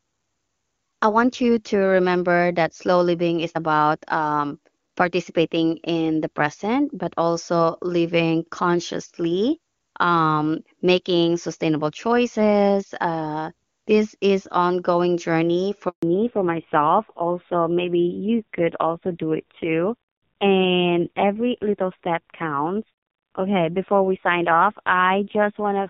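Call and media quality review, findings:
Handover gap, 15.89 to 16.03 s, just after "this is ongoing journey". Audio cuts to silence for 140 ms. No frames arrived while the call switched networks.

Fallback to narrowband from 16.03 s to the end. Nothing above 4 kHz, so the sound turns duller and rougher. The drop from the earlier clear HD Voice fits a switch from AMR-WB 23.85 kbit/s to AMR-NB at 5.9 kbit/s.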